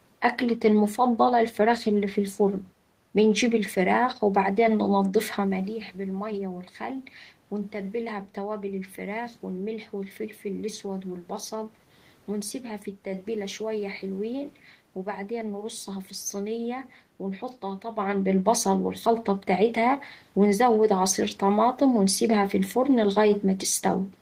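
Nothing stood out on listening; the background noise of the room and the shifts in level as the talker moves relative to the microphone, around 5.5 seconds in and again near 18 seconds, are part of the recording itself.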